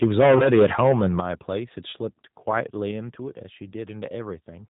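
A speech recording of about 5 seconds, heard through the G.729 codec throughout, and the coding damage is plainly audible. Everything above 4 kHz is gone, so a spectrogram shows a hard ceiling with nothing above it. The voice has the rough, slightly synthetic texture of a model that rebuilds each 10 ms frame from a vocal tract filter, a pitch predictor and a handful of pulses. That sound fits an 8 kbit/s codec of that family.

From 0.02 to 1.2 s the loudest syllables carry a harsh, crackling edge. This is microphone overload, most likely from input gain set so high that peaks ran about 11 dB past the converter's limit. On the waveform the tops of the peaks are sliced flat, in roughly one sample in seven. The spectrogram shows smeared broadband energy at each clipped burst.

VoIP packet loss concealed by the speech codec affects the audio twice. In the region 0.38 to 0.44 s, a gap of about 20 ms, consistent with two 10 ms frames, is bridged by the decoder extending its last pitch and filter. 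This produces a brief, fading stretch of sound. Because each frame builds on the previous one, the sound stays weak or distorted for a short while after the gap. At 1.92 s a single 10 ms dropout is concealed the same way. On a spectrogram, both concealments appear as frozen, smeared energy that dims rather than the normal changing patterns of speech.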